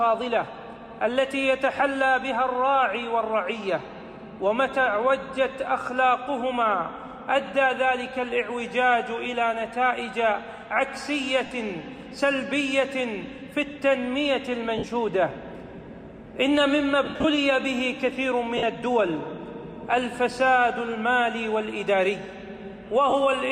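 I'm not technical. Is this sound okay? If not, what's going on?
No. Brief hissy smears replace the sound at 11.46 s, 14.78 s, 17.04 to 17.24 s, 18.57 s and 23.10 s. These are lost LE Audio frames: missing Bluetooth audio was patched with noisy guesses.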